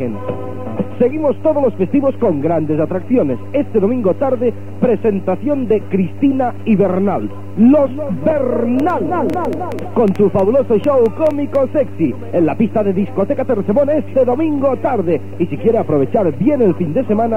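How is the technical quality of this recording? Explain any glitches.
A train of clicks from 8.80 to 11.56 s, about fifteen pulses at roughly 5.4 per second, spaced irregularly. Something outside the audio, likely interference from nearby equipment or a faulty connection or power supply, injects a short burst of much the same shape each time. The clicks peak at about 5 dB above the surrounding sound, so they stand out as uneven ticking and popping across those seconds, audible in the pauses as well.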